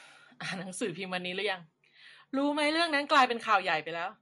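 From start to finish the speech carries plainly audible MP3 compression artefacts, likely from MP3 coding. Nothing is present above 11.3 kHz, a hard treble ceiling of the kind an encoder imposes when bits are scarce, and the damage points to a low bitrate around 48 kbps. With so few bits, weak frequency components are dropped and reinstated from frame to frame, giving the sound a watery, swirling texture and smearing sharp onsets.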